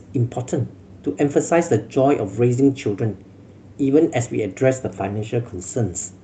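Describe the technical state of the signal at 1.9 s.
At 1.9 s the signal is intact, with no audible technical fault at that point.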